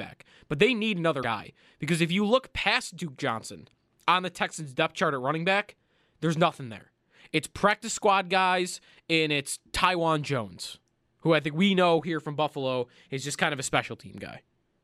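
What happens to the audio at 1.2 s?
Right after "they need", from 1.19 to 1.24 s, there is damaged data in the compressed stream. For about 50 ms the decoder meets frames whose bytes are wrong. It misreads or rejects them and loses its place in the stream. It then scans forward for the next valid frame header before normal decoding resumes. Listeners hear this as a brief, unnatural chirp or blip cutting into the speech.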